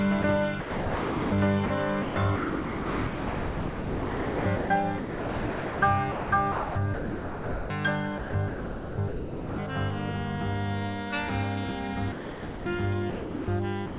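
From 0.22 to 9.58 s, and again from 12.12 s to the end, the sound is chopped, with about 6.4 s and about 1.1 s respectively replaced by synthetic comfort noise. This is likely sound chopped by the voice detector, gating transmission on and off. The band stops at 4 kHz, which fits a G.711 A-law call path at 64 kbps.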